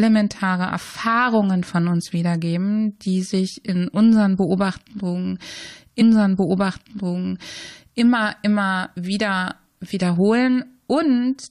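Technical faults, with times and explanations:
6.00–8.00 s: stream segment repeated. At 8.00 s the speech jumps back and about 2.0 s of it plays a second time, starting again from 6.00 s. A small blip marks the join. The player fetched or queued the same chunk of the stream twice and played both copies in sequence. The words "immer wieder" come just after the repeat. The clip is about 2.0 s longer than the original.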